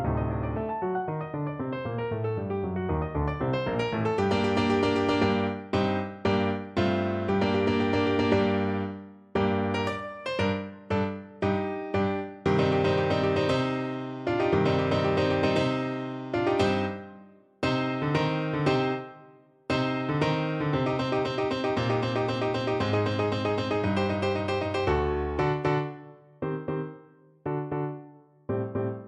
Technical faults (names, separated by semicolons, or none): none